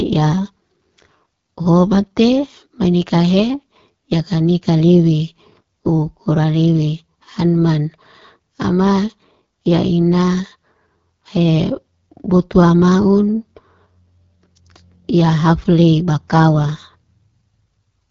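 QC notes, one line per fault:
Throughout, AMR wideband (HD Voice) codec: rough, raspy speech with nothing above 7.4 kHz, which fits a low 8.85 kbit/s rate that starves the pulse-driven model.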